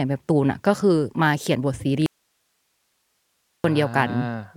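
At 2.06 s the speech cuts out abruptly. It returns just as suddenly at 3.64 s, about 1.6 s later. This is an audio dropout to a faint residue. The gap holds only a low hiss, about 50 dB below the speech level. It does not sound like a pause or a fade. The likely cause is a brief loss of the wanted signal while the path after the break stayed live, passing only its own noise.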